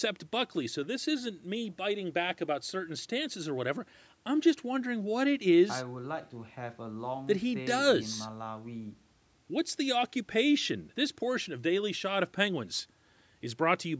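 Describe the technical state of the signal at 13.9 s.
At 13.9 s the speech is intact, with no fault present, only the normal band limiting of call microphone processing, which leaves nothing above 8 kHz and trims the lowest bass.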